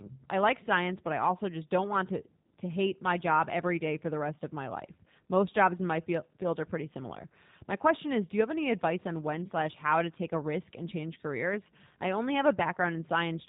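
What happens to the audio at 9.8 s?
At 9.8 s the speech carries G.729 codec damage, as it does from start to finish. It is plainly audible. The codec rebuilds each 10 ms frame from a vocal tract filter, a pitch predictor and a few pulses. That leaves nothing above 4 kHz. The speech stays intelligible but sounds rough, buzzy and slightly synthetic. The dull, band-limited tone fits an 8 kbit/s VoIP codec.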